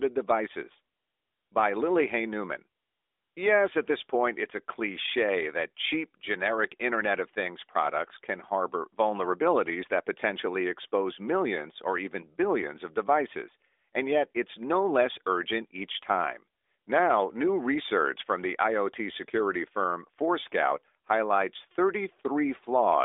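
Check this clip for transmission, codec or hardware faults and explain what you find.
No transmission, codec or hardware faults can be heard in this speech clip. It has passed through an AMR narrowband mobile codec: the sound stops at about 3.7 kHz, sits in a phone-line band of roughly 300 Hz to 3.6 kHz, and has the light coding texture that points to the top 12.2 kbps mode.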